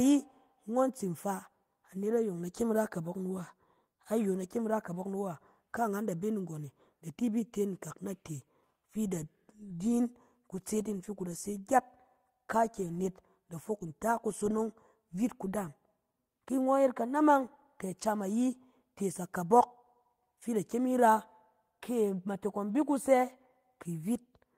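No technical faults can be heard anywhere in the recording; the signal stays continuous and steady throughout.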